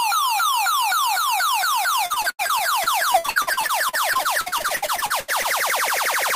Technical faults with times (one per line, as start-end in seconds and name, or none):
2.06-5.46 repeated packet loss (robotic sound)